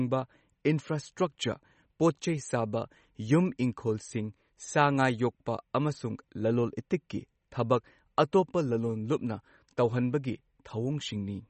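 From start to finish the speech has a hard ceiling with nothing above 8.4 kHz, and a watery, swirly texture with chirpy sibilants, all plainly audible. That's likely MP3 compression, and the damage fits a starved bitrate around 32 kbps.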